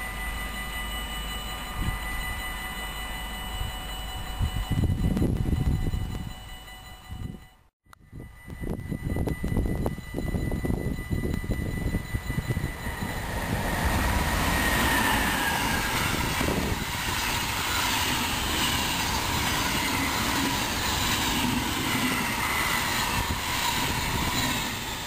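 Regular ticks run through the sound from 0.07 s to 25.0 s, one every 0.098 s, about ten a second. They're periodic USB or driver dropouts: something blocks the bus or driver on a fixed cycle, and a couple of milliseconds of audio get skipped each time.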